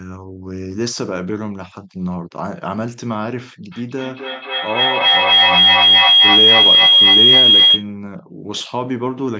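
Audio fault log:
3.72–7.95 s, feedback howl: two devices in the same room are on the call, so the sound keeps going round from microphone to loudspeaker and back, gaining a bit each trip. The repeats don't fade. They narrow to a ringing tone around 3 kHz, pulsing about every third of a second with the loop's delay, and swell to about 12 dB above the speech before the loop breaks and the howl stops.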